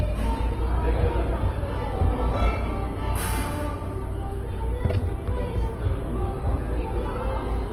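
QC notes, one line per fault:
Throughout, Opus compression: tonal parts of the sound turn grainy, rough and noise-filled, with little swirling and the full bandwidth kept. This is likely heavy Opus encoding in its music mode, which fits about 16 kbps, where starved bands are refilled with noise or folded lower content.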